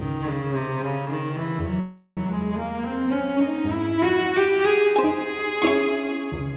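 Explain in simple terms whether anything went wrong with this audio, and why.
Call audio freeze, from 1.8 to 2.28 s: the sound stalls and is stretched into a fading buzz for roughly a third of a second. Packets were likely held up in transit, so the receiver filled the wait, then carried on with nothing lost.

Channel delay (comb filtering), from 2.95 s to the end: one channel runs about one sample late, and the two are mixed together. Matching parts cancel at evenly spaced frequencies starting near 20 kHz, far above the call's 4 kHz limit, so the dulling is slight.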